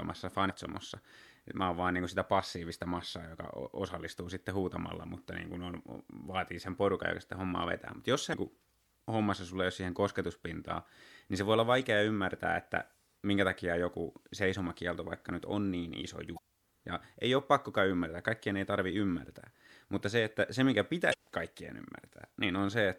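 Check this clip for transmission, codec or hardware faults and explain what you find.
The speech contains one recurring fault: damaged data in a compressed stream, heard five times. It occurs at 0.46–0.50 s, at 8.30–8.34 s just before "kuin hommassa sulle ei", at 11.82 s between "niin se voi olla" and "ymmärtää että minkä takia", at 16.34–16.39 s, and at 21.10–21.14 s. Corrupted bytes make the decoder misread frames and lose sync until it finds the next frame header. Each event sounds like a brief chirp or blip of about 40 ms, and the one at 11.82 s is shorter.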